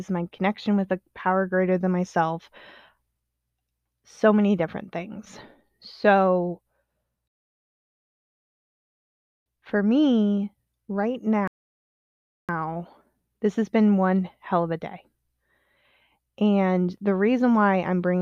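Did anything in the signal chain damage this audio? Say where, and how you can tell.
Yes, two rebuffering stalls at the network and playback stage: from 7.28 to 9.46 s, just before "for me right", and from 11.48 to 12.49 s, just after it. The player ran dry and paused, adding about 2.2 s and 1.0 s, then resumed seamlessly. Waveform shows flat silence; the spectrogram shows blank vertical bands.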